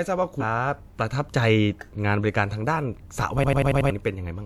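A speech clip with two separate faults. At about 0.40 s the audio lurches forward at a brief join between 0.40 and 0.43 s, and roughly a third of a second of speech is simply gone. These are compressed frames skipped: the decoder never played a run of whole frames, either missing or rejected as damaged. The jump is a multiple of the 46.4 ms frame length, about seven frames. From 3.44 to 3.90 s the sound turns into a rapid machine-gun stutter, one short fragment repeating five times at 10.8 per second, with about half a second of real audio lost beneath it. This is a system hang loop: the computer or driver stalled while the sound hardware kept replaying the same 92.88 ms stretch of its ring buffer, which fits a 4096-sample buffer.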